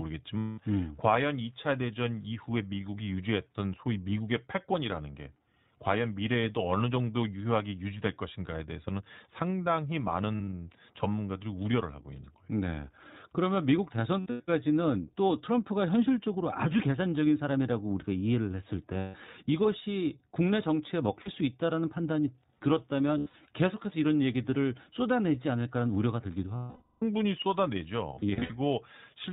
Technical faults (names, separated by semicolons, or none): iLBC codec; lost iLBC frames